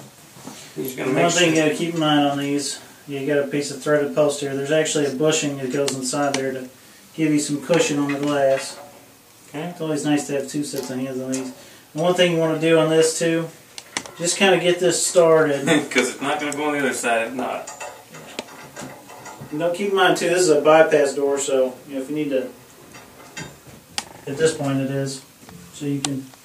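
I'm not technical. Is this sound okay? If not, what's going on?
Yes, nothing in this recording points to a technical problem with the signal.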